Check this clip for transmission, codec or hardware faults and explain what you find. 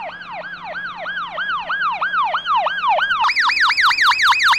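One fault: a section at the wrong speed from 3.24 s to the end at 4.59 s. The audio jumps to 1.58 times speed and rises about seven semitones, likely from playback against the wrong clock.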